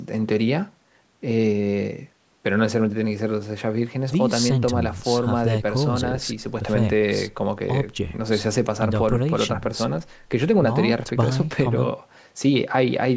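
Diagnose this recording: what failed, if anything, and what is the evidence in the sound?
Nothing stood out on listening to this speech recording, which carries the usual band-limited sound of call microphone processing with no content above 8 kHz.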